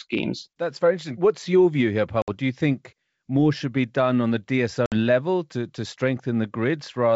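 At 2.22 s and again at 4.86 s the speech drops into a hard-edged 60 ms hole, the sound of packet loss on an ADPCM call. A few packets go missing and are filled with silence. The decoder's adaptive predictor and step size then disagree with the sender's, so each return is slightly distorted before settling. The waveform shows a flat gap, and the spectrogram shows a blank vertical band. The surrounding wideband G.722 sound stays clear up to about 7 kHz, which fits 64 kbit/s.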